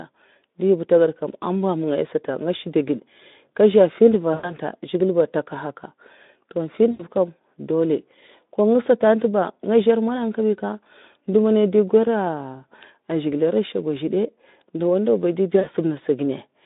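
A speech recording over a narrowband Speex link, and it's got three spots of VoIP packet loss concealed by the speech codec: 4.33 to 4.55 s, 6.91 to 7.06 s, and 15.59 to 15.67 s. In each, the decoder loses packets and keeps extrapolating from the last pitch and filter with falling gain, so you get a short buzzy or noisy, smeared tail that fades and takes a moment to recover. The gaps come to about 100, 80 and 60 ms, which fits runs of 20 ms frames going missing.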